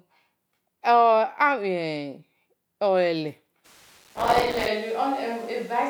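At 3.66 s the speech turns roomy and hollow, losing bass without dropping in level, with room noise roughly 30 dB below it, likely a switch to a distant microphone that lasts to the end. From 3.98 to 4.68 s a gritty crackle tears through it, made of many tiny silent dropouts fitting buffers of roughly 3 ms: processor overload crackle, from deadlines missed in a row.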